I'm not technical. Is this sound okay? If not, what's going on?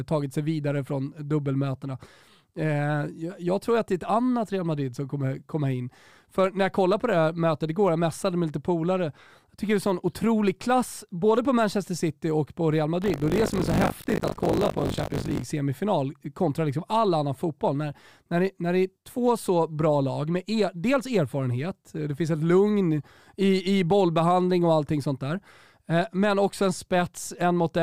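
No. From 13.0 to 15.45 s there is buffer tearing: the playback system's writing and reading of audio have slipped out of step, so about a third of each small chunk replays sound from a moment earlier. This causes a robotic 50 Hz buzz over the speech.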